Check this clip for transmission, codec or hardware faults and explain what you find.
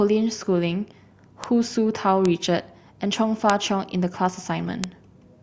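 Four bit error spikes, at 1.44, 2.26, 3.50 and 4.84 s. A single flipped bit in one sample makes it jump to about -8 dBFS at the first two and about -2 dBFS at the last two, giving isolated broadband ticks. Unlike dropout clicks, nothing goes missing around them.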